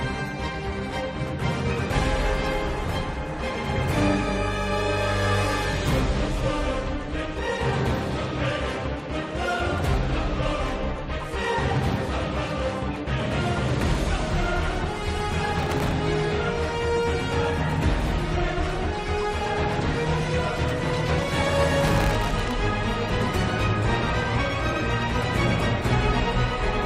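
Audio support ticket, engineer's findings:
Processor overload crackle at 15.59–15.92 s and 21.81–22.51 s: gritty tearing. Dozens of sub-millisecond buffers missed in a row, each replaying stale audio with hard edges. CPU/audio thread overload.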